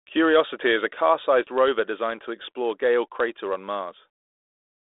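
Speech carried over a G.726 ADPCM telephone link at 32 kbit/s, confined to roughly 300 Hz to 3.6 kHz with only the light coding texture that rate brings, shows no technical fault.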